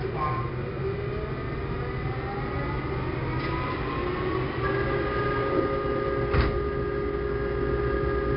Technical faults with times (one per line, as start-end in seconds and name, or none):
0.00-8.37 4-bit ADPCM compression